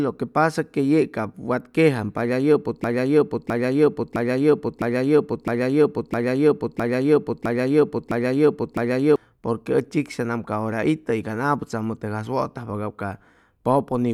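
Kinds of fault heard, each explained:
Broken-record loop: the player or stream likely stalled and kept re-sending the last fragment it held, so a 0.66 s piece of the speech repeats exactly, back to back, ten times from 2.84 to 9.16 s, and the speech due in that span is lost.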